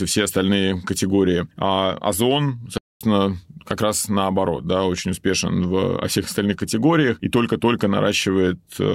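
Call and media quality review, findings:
Playback stall, 2.78–3.01 s: speech cuts to silence mid-flow for about 230 ms, then resumes. Likely cause: player buffer underrun or blocked playback thread, leaving the output with no samples to render until data or scheduling recovered.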